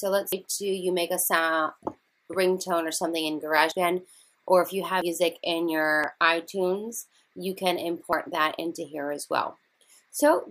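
Dropped buffer (overrun) at 0.33, 3.72, 5.02, 6.04 and 8.13 s: at each the sound jumps ahead with no gap, losing roughly 150 ms at 0.33 and 5.02 s and about 50 ms elsewhere, likely because samples were overwritten before being collected.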